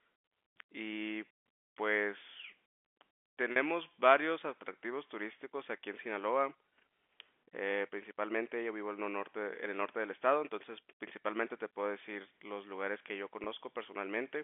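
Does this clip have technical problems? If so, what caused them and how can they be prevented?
Yes, there is packet loss with pitch repetition at 3.52 to 3.56 s (40 ms, fitting two 20 ms packets) and at 13.44 to 13.46 s (20 ms). The receiver bridged each gap by looping the last pitch period, so the sound briefly holds with a slight buzz. Unlike a plain dropout, there is no silent hole or click. The narrowband telephone tone of the G.711 line is audible throughout. A larger jitter buffer or forward error correction on the network path would prevent these losses.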